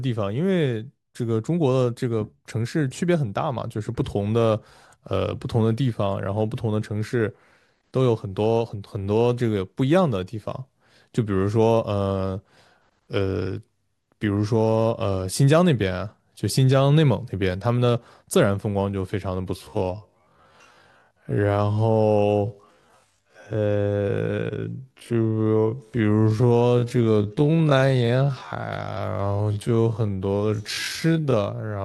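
From 19.54 s to the end, the speech abruptly slows to half its pace while the pitch stays where it was, leaving the audio drawn out. This is a time-stretched section. The likely cause is software lengthening that stretch of audio to fill a target duration, keeping the pitch fixed by repeating short overlapping pieces of the sound.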